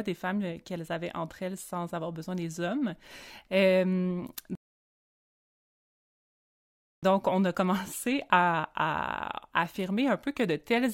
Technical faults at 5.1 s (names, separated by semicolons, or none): rebuffering stall